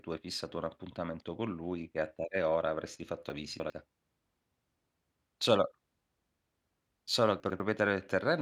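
After "tale ora avresti fatto", from 3.3 to 3.7 s, chunks arrive out of order: a 100 ms piece plays three chunks late. At 7.4 to 7.6 s, a chunk lands one slot late. Unlike a dropout, nothing is missing. The speech jumbles.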